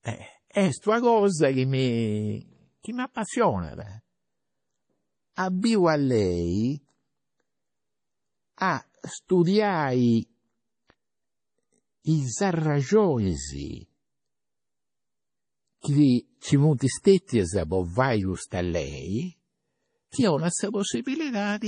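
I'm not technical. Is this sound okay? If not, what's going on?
No. MP3 compression runs throughout, from start to finish, most likely from a heavily squeezed file. With too little data to work with, the encoder dropped everything above about 10.5 kHz and discarded quieter detail, so the speech sounds dull, watery and swirly, with metallic chirps on s sounds and smeared attacks.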